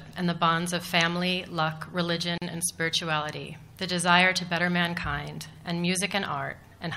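At 2.38 s the sound drops out and a gap lasts until 2.42 s, a hole of about 39 ms with smeared edges, after which it resumes exactly where it stopped. This is a gap at a join of encoded pieces: the audio was encoded in separate segments and spliced without trimming, so the encoder's start-up delay and the padding in the final frame of the earlier piece remain as dead air at the seam.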